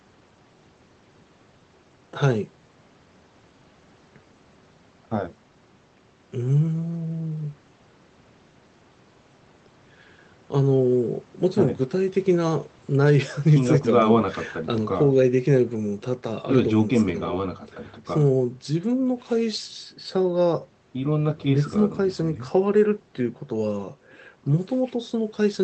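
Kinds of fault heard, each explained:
No kinds of fault are heard in this speech clip.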